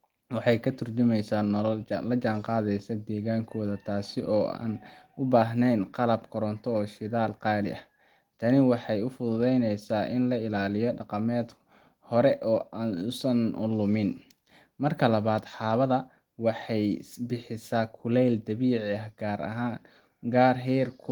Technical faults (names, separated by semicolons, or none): none